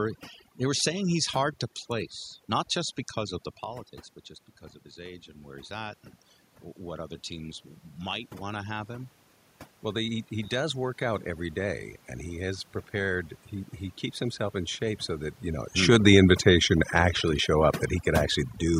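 Across the whole clip, overdone noise removal is at work. The room noise behind the speech has been pushed down, but what remains is a sparse field of twinkling specks, because individual frequency bands are being gated fully on and off as they hover around the reducer's noise estimate. Quieter parts of the speech sit close to that estimate and get stripped along with the noise.

From 3.66 s to 12.72 s, automatic gain rising can be heard. Just before it starts, around 3.5 s, the talker moves away from the microphone and the input drops by about 12 dB. The gain control reads this as too quiet and slowly winds its gain up by about 8 dB over roughly nine seconds. Speech and the residual background swell together as it climbs, so the over-processed noise floor becomes steadily more audible.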